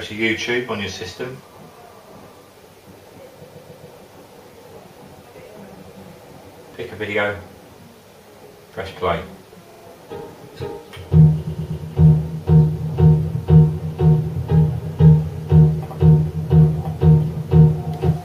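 Repeated frames occur at 3.45 to 3.87 s, 9.70 to 9.84 s and 11.47 to 11.81 s. A run of compressed frames was sent again, so the decoder replays the same 139, 46 and 116 ms blocks three extra times each. Each is heard as a stutter, and together they add about 0.9 s.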